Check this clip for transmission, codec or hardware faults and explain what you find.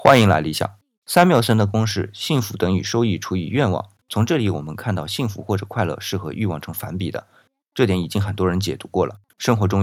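Two kinds of fault are present, both in the first second and a half of the speech. There are two bursts of microphone overload and one microphone volume step-down.

Microphone overload occurs from 0.05 to 0.34 s and again from 1.16 to 1.52 s. The loudest peaks have flattened tops and a harsh, crackling edge. The likely cause is input gain set too high, driving peaks about 11 dB, then about 6 dB, past the converter's limit. A few percent of samples are cut in the first burst and a smaller share in the second.

Microphone volume stepped down at 0.08 s. Voice and background both drop by about 2 dB in one abrupt step. This comes right inside the first distorted burst. The likely cause is call software reacting to the clipping by lowering the device's input volume.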